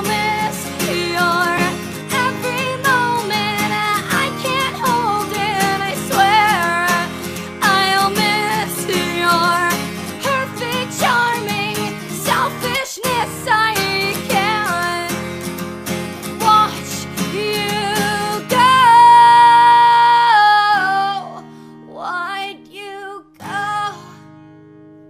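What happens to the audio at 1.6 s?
Right around there, from about 1.57 to 1.61 s, there's a corrupt frame decoded. A few compressed frames got bit errors, and the decoder played them anyway, so misread gains and codes throw energy into the wrong frequencies. You hear it as a short, loud blip or burst, fairly close to full scale.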